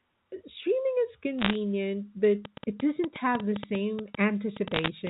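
From 1.39 to 1.56 s, bit errors on a digital phone line corrupt a short stretch of the stream at a rate of roughly half a percent. Each flipped bit alters a single sample, and where it lands on a sign or high-order bit the sample jumps sharply, so the speech carries a brief burst of sharp, gritty crackle while its band-limited telephone tone, cut off above 4 kHz, carries on unchanged beneath it.

From 2.45 s to 5.08 s, a train of clicks is laid over the audio, likely from electrical interference or a struggling interface injecting repeated pulses. Around twenty similar clicks arrive at about 6.9 per second on an uneven pace, peaking roughly 10 dB above the speech, so they stand out as a restless ticking that continues through pauses as well as over talking.

From 4.74 to 4.88 s, a second cluster of bit errors hits the line at a somewhat higher rate, close to 0.7 percent. The flipped samples produce another short spray of crackle that sits on top of the ongoing clicks, thickening the noise briefly before the clip ends.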